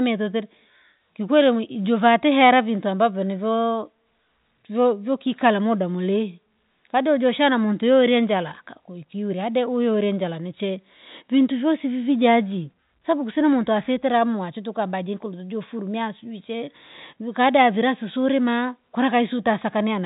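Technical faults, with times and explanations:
Nothing in this speech recording stands out as a fault; it carries the usual G.711 telephone coding, so the band tops out around 3.8 kHz as you'd expect from a phone line.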